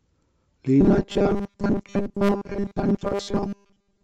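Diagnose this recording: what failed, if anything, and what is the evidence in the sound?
The speech turns robotic from 0.81 s right through to the end at 4.03 s. It becomes a stiff, metallic buzz locked at 200 Hz that still loosely tracks the syllables. That's robotic sound from repeated short buffers, most likely at the driver or buffer stage. New audio arrives too slowly, so a 5 ms chunk gets replayed over and over, and most of the real signal is simply skipped. The loop period is what imposes that fixed 200 Hz pitch.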